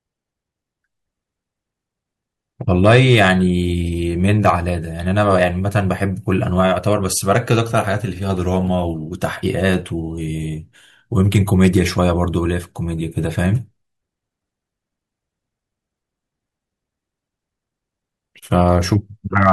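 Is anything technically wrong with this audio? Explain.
Yes. The speech has hard clipping in three places: 2.85 to 3.30 s, 11.35 to 12.10 s, and 19.37 to 19.52 s. Here the level went past what a stage in the chain could pass. The loudest peaks were cut off flat. The first burst is overdriven by about 4 dB, and the later two by about 2 dB. The flat tops add high harmonics, heard as a brief harsh crackle on the loud parts.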